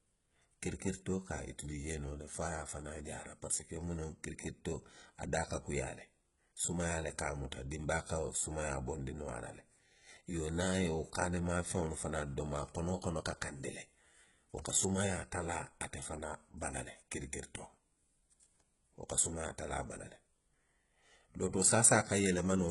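Throughout the speech, s sounds are gritty and metallic with nothing above 11.1 kHz, likely heavy HE-AAC compression synthesising treble from lower bands, which fits about 12 kbps.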